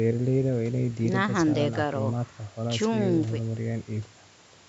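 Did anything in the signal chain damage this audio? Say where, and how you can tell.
No, nothing in this speech's signal chain damaged it.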